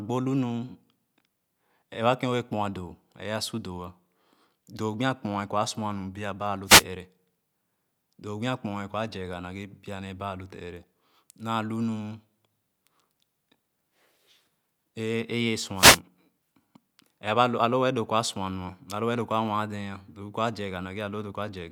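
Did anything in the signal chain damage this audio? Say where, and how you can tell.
Yes, the wireless mic's radio link took two wireless microphone noise hits: short static swishes just after "biaba alo" (6.66 to 6.84 s) and again at 15.75 to 16.0 s. Reflections briefly cancelled the FM carrier, so receiver noise surged over the speech.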